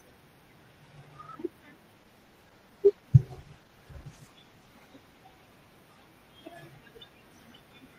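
From 1.98 s to 6.55 s, a call bitrate drop starves the encoder; speech turns rough and muffled, fitting 16 kbps down from 64.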